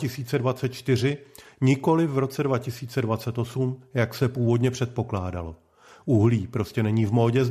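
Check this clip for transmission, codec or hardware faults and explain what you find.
No faults detected.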